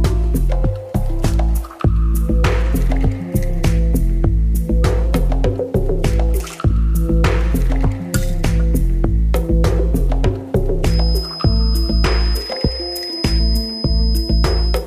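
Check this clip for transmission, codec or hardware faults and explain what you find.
One fault turns up, a feedback whistle. From 10.8 s to the end, a thin 5 kHz tone at one steady pitch, swelling and fading slowly in level, sits well below the sound. This is likely a loudspeaker-to-microphone loop held right at the edge of feedback.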